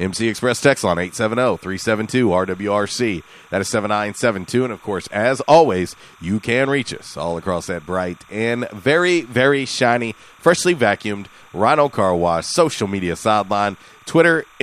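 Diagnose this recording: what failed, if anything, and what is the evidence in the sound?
Timecode bleed in the analogue wiring: a faint chirping warble sits under the speech the whole way, around 30 dB down. That's 30-frame linear timecode leaking across, flipping near 1 and 2 kHz.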